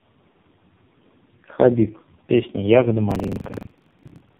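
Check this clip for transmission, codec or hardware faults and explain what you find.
Two faults are present: tandem speech coding across the whole speech clip, and buffer tearing near the end.

Tandem speech coding, throughout: the speech sounds rough, muffled and warbly, with nothing above 3.5 kHz. It passed through a low-rate AMR-NB coder at 5.9 kbit/s, then G.711 mu-law, then AMR-NB again. The second coder reworked the first one's errors, compounding the damage.

Buffer tearing, from 3.07 s to the end: a robotic buzz at about 23.4 Hz rides on the speech. This fits a 2048-sample buffer where the writer and reader have slipped out of step. In every period, roughly two-fifths of the audio is stale by about a tenth of a second, with hard joins at each edge.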